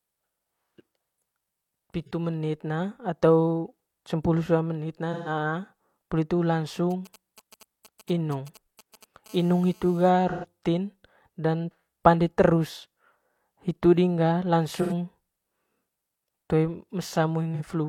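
At 2.06 s a brief smeared, noisy patch of about 43 ms interrupts the speech, and after "atau cempulu sua meenut", at 5.13 to 5.29 s, a longer phasey blur of about 128 ms follows. Both are AAC frame loss with concealment: the decoder rebuilt the missing audio from the last good spectrum. The lengths fit one and then three lost frames.

After "poli hitu", from 6.91 to 9.28 s, a galloping dit-dit-dit of short 217 Hz buzzes sits roughly 25 dB below the speech. These are GSM signalling bursts: a nearby 2G phone sent brief groups of radio bursts that the audio circuit rectified.

From 9.29 to 10.10 s it changes into a continuous hard, raspy 217 Hz buzz, rich in harmonics and about 30 dB down. This is GSM phone buzz, which comes from the phone transmitting steadily during a call and the circuitry demodulating each pulse.

The concealment smear returns at 10.29 to 10.45 s for about 128 ms, then after "hitu ding ga" at 14.81 to 14.92 s for about 85 ms, and finally at 17.54 s for about 43 ms. 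These fit three, two and one lost frames.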